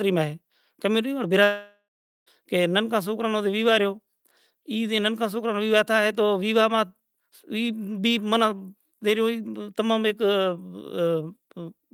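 At 1.43 s the speech stops and is replaced by a fading buzz that dies into about 0.44 s of near-silence, with clean speech returning at 2.29 s. This is likely a long network dropout, with roughly 0.84 s of audio lost. On a spectrogram the smeared tail gives way to an empty band.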